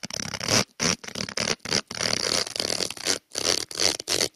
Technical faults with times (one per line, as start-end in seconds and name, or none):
0.00-4.36 noise suppressor applied to music or sounds
0.97-1.93 sound cut by the noise suppressor